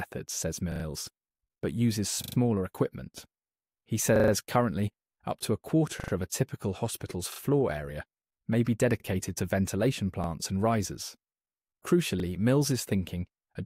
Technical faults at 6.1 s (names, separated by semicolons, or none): repeated buffer